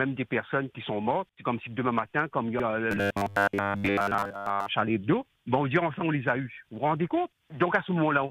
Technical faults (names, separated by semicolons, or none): robotic sound from repeated short buffers